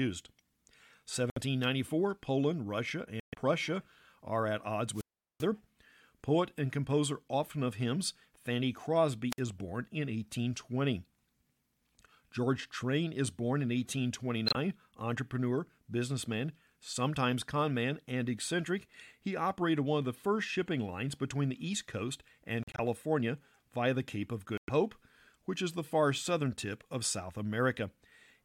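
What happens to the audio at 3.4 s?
A corrupt frame muted the sound: damaged compressed frames were rejected and replaced by silence, cutting a sudden hole from 3.20 to 3.38 s, ending just before 3.4 s.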